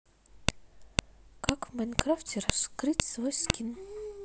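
Sharp clicks at 0.49, 0.99, 1.49, 1.99, 2.50, 3.00 and 3.50 s mark a file header played as audio: each half-second piece's header bytes reproduce as a brief, loud snap over the speech.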